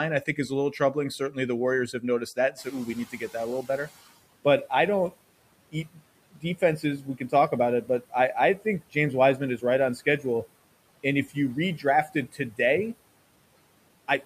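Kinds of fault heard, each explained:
Speech cut by the noise suppressor: The suppressor mistakes bits of speech for noise and pulls them down along with the background. It happens in four stretches across the clip, dropping word edges by about 11 to 17 dB, worst between 5.72 and 10.25 s, so endings sound swallowed.
Noise suppressor catching up: When the room noise jumps up by about 12 dB around two and a half seconds in, the noise estimate lags. The noise leaks through at first, then sinks by about 13 dB over roughly 1.5 s, settling by 4.06 s.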